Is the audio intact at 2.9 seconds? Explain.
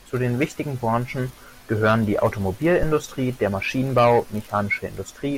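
No. Phantom power switched on or off on the live input pushed a voltage step through the coupling capacitors, giving a phantom power thump from 2.83 to 2.97 s. It is a deep thud peaking at about -11 dBFS that decays within 31 ms.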